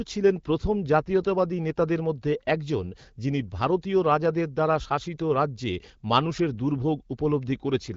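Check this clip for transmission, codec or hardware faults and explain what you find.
No faults found: the speech carries only the light coloration of AMR wideband (HD Voice) coding, which fits a rate of about 12.65 kbit/s.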